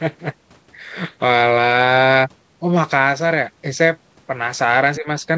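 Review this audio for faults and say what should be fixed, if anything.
From 4.97 to 5.08 s the speech abruptly sinks by around 15 dB for about a tenth of a second. This is likely speech suppressed in double talk: with both sides talking, the echo canceller mistook the near talker for loudspeaker echo and turned it down. Stronger double-talk detection in the echo canceller, or less acoustic coupling between loudspeaker and microphone, would prevent it.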